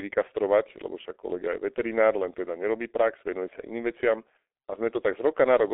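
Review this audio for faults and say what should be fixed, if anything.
Throughout, the speech sounds muffled and hoarse, with blurred consonants and nothing above 3.8 kHz. This is heavy damage from the G.723.1 codec. It passes only a 300 Hz to 3.5 kHz line band and codes 30 ms frames with a slowly updated voice model, which fits a bitrate near 6.3 kbit/s. To prevent it, record or transmit through a wideband codec at a higher bitrate.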